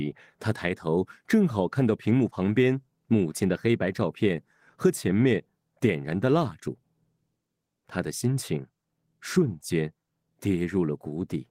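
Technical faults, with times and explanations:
No technical faults can be heard in this speech recording. Nothing in it calls for a time or an explanation.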